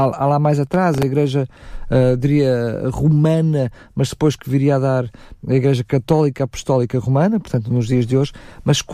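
Processor overload crackle runs from 0.67 to 1.03 s, just after "lá mais": the processor repeatedly missed its deadlines for very short buffers, around 1.5 ms each, and several times replayed stale audio with hard edges, giving a gritty, tearing crackle over the speech.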